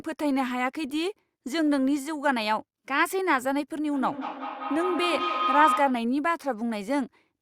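From 3.93 s to 6.15 s a feedback howl appears. Two devices in the same room are joined to one call, so sound from a loudspeaker re-enters a microphone and returns louder on each pass. Rather than dying away, the repeats swell and narrow to a tone around 1.5 kHz, pulsing roughly every fifth of a second with the loop's delay, and at its peak the howl is about as loud as the speech.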